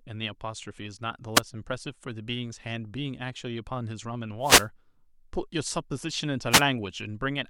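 At 1.34 s, 4.41 s and 6.50 s the speech is hit by wireless microphone noise, lasting roughly 0.07 s, 0.26 s and 0.12 s. Each time the FM radio link fades as reflected signals cancel, letting receiver noise swell into a brief swish of static. A spectrogram shows broadband vertical smears over the speech. The waveform shows fuzzy noise bursts.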